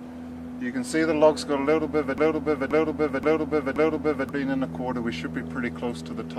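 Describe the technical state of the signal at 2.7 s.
At 2.7 s the signal is inside a broken-record loop running from 2.18 to 4.29 s. A 527 ms fragment plays four times back to back, identical each pass, and whatever audio belonged in that stretch is gone. The likely cause is a stalled player, encoder or stream re-sending its last buffered piece. On a spectrogram the same block of energy tiles across four identical columns. The waveform shows a repeating shape with abrupt seams every 0.53 s.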